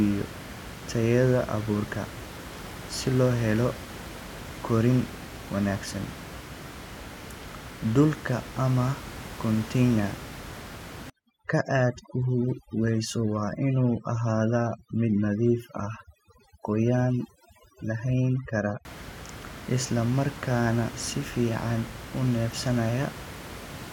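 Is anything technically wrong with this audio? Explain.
Yes. From 11.10 to 18.85 s, overdone noise removal pulls frequency bands near the estimated noise floor down hard. The room noise, about 14 dB below the speech, collapses into twinkling near-silence, and quiet speech detail vanishes.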